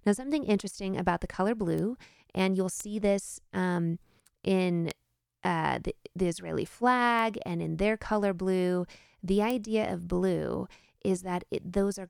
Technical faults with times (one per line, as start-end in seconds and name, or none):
1.78 bit error spike
2.80 bit error spike
4.91 bit error spike
7.19 bit error spike
9.50 bit error spike